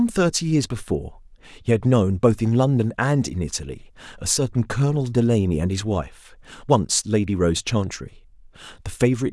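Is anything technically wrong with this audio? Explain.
No, nothing technically wrong can be heard in this speech recording; the signal stays intact and stable throughout.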